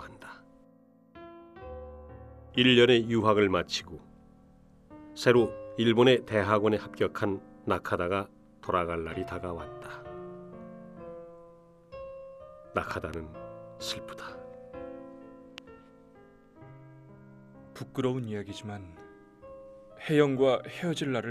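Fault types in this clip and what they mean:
Loud pop: A sharp transient sits on top of the audio, likely a sudden voltage step or pulse from a plug, switch, static discharge or driver glitch, shaped by the circuitry downstream. Between 12.91 and 13.16 s two pops arrive in quick succession, and a single pop follows at 15.58 to 15.60 s. Each peaks roughly 10 dB above the surrounding signal, while the underlying sound continues beneath them without interruption.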